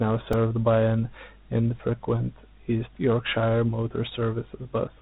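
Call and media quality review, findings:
Dialogic VOX ADPCM, whole clip: band stops near 3.8 kHz; gritty hiss rides on the speech and drops away with it, unlike steady line noise. 4-bit adaptive coding, consistent with a 32 kbps stream.

Repeated buffer, 0.33 s, just before "by an infrequent": brief buzz rather than stutter. One tiny chunk, consistent with a 64-sample buffer, replays four extra times at hard joins; not a dropout, since there's no silent gap. About 5 ms lost.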